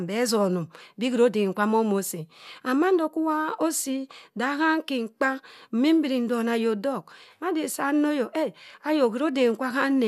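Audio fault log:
Nothing stood out on listening to this speech recording.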